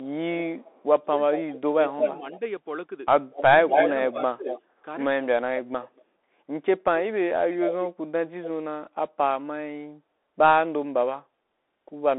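Bluetooth CVSD headset codec, throughout: the one-bit delta coding, which fits a 64 kbps link, leaves nothing above 3.8 kHz, a granular hiss, and scratchy, slope-overloaded sibilants.

Echo leak, 0.61 to 2.39 s, with further bursts at 3.31 to 3.87 s, 4.47 to 4.62 s, 5.86 to 6.03 s and 7.51 to 7.88 s: a delayed copy of the speech, lagging by 213 to 240 ms, most likely escaped the far end's echo canceller. It is loud at 3.31 s and barely audible at 5.86 s.

Speech suppressed in double talk, 1.06 to 2.41 s and 3.66 to 4.58 s: the canceller likely mistook overlapping speech for echo and ducked the talker. The speech dips by roughly ten to fifteen dB across about half a second in the first stretch and about 0.4 s in the second.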